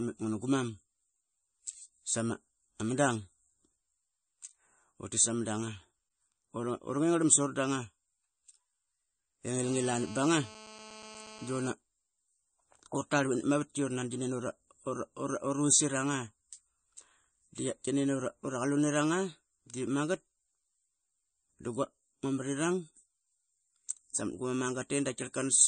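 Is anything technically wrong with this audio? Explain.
Yes, there are two faults.

Throughout the clip, the speech sounds watery and swirly, with smeared consonant attacks and nothing above 9.1 kHz. This is plainly audible and is likely MP3 compression at a low bitrate, around 34 kbps. Short of bits, the encoder drops weak frequency lines frame by frame and cuts the treble at a fixed point.

From 9.63 to 11.71 s, a GSM phone buzz sits about 18 dB below the speech. It is a hard, raspy 217 Hz tone with many harmonics, unrelated to the speech, and stays steady throughout. A nearby 2G phone on a call transmits in bursts, and the audio circuit rectifies those radio pulses into sound.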